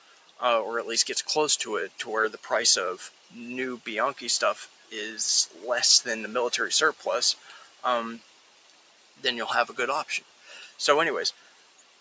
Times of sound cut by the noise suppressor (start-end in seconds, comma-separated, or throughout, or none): 0.00-0.41, 3.04-3.35, 4.60-4.93, 5.47-5.62, 7.35-7.84, 8.18-9.24, 10.21-10.80, 11.32-12.00